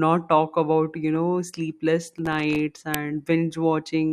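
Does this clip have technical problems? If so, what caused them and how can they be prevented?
Yes, two of them. From 2.09 to 2.59 s there's processor overload crackle on the speech: the machine couldn't finish its audio buffers in time, and around twenty deadlines slipped in that half second. Each miss left a tiny hole of silence with hard edges. The buffers sound like they were well under a millisecond, so the dropouts pile up into a gritty tear until the load eases. Larger buffers and less competing work on the audio thread would prevent it.

At 2.94 s there's an uninitialised buffer: a block got played before any audio had been written to it, so whatever was left in memory went out as samples. You hear a sharp, loud digital spit lasting about 1.33 ms, which fits a 64-sample block. Zero-filling buffers before they're handed to the output, or outputting silence when no data is ready, prevents it.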